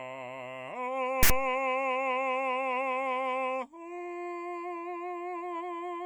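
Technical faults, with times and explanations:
1.23–1.30 s, file tags played as audio: a 75 ms block of text tag data is decoded as samples, so the music breaks into a loud, one-sided rasp with hard edges, then drops to silence where the zero padding is read as sample values.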